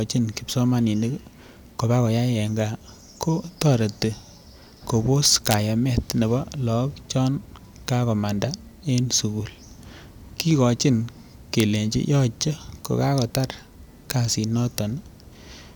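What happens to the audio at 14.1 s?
At 14.10 s a sharp crack cuts through the speech. This is integer overflow. A peak about 3 dB over the limit wraps to the opposite sign instead of clipping.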